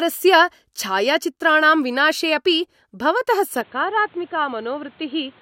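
Input switched to a poorer device at 3.61 s, right after "विनाशे अपि भवतः", and lasting to the end of this speech clip: with no gap, the sound turns dull, cut off above 4.3 kHz, a few decibels quieter and over a faint new noise floor, likely from recording moving to a lower-grade microphone.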